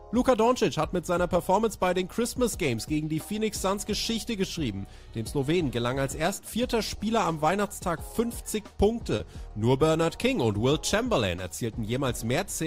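Short concealed packet loss occurs twice, at 6.95 s and from 9.16 to 9.20 s. About 10 ms, then 30 ms, of audio arrived too late to decode. The receiver extended the preceding sound to cover each gap. Each is heard as a brief smear or wobble.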